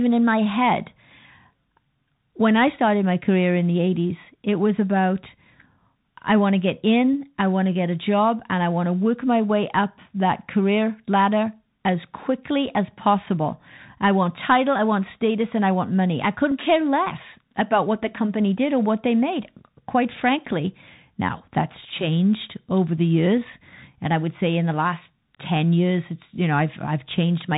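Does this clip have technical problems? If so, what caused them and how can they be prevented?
Yes. The whole clip carries Bluetooth CVSD headset codec damage. The sound stops sharply at 4 kHz. S sounds turn scratchy, and a granular hiss sits underneath. That fits CVSD's one-bit, 64 kbps stream. Prevent it by switching to a wideband headset mode or a wired microphone.

At 16.51 s, between "I want money I" and "care less about what", a Bluetooth headset packet repeated causes a brief buzz near 267 Hz. About 7.5 ms of stale audio was decoded again, which fits two lost packets. Prevent it by keeping the headset close to the phone and away from radio interference.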